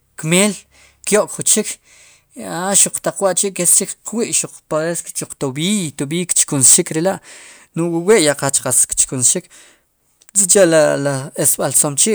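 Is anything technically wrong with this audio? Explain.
Yes. Hard clipping hits the speech at 0.32–0.46, 1.07–1.54, 2.75–3.79, 6.31–7.07, 8.09–9.31, 10.37–10.86 and 11.45–12.04 s, overdriving the stage by about 6 to 12 dB. Peaks are sliced flat, adding high harmonics heard as harsh fuzz, worst near 6.3 s.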